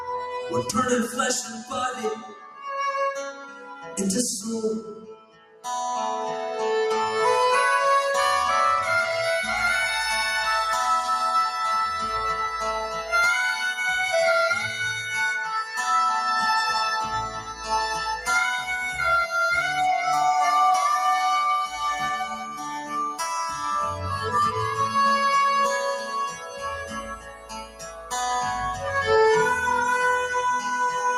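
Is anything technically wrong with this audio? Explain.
Yes. Throughout, the sound pumps and thins, its level swinging by around 5 dB. A noise suppressor applied to music or sounds is treating sustained material as noise.

Sound cut by the noise suppressor sinks, with held parts and tails dipping while onsets survive. This happens at 1.08–2.66 s (about 10 dB), 3.33–3.97 s (about 7 dB), 4.88–5.66 s (about 16 dB), 17.29–17.70 s (about 9 dB), 22.29–24.06 s (about 11 dB), 25.99–28.13 s (about 16 dB) and 28.72–28.91 s (about 7 dB).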